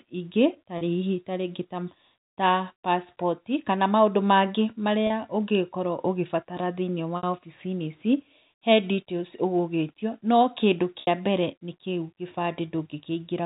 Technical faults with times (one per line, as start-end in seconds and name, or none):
0.78-0.81 packet loss with pitch repetition
5.07-5.10 packet loss with pitch repetition
7.17-7.23 packet loss with pitch repetition
11.01-11.07 packet loss with pitch repetition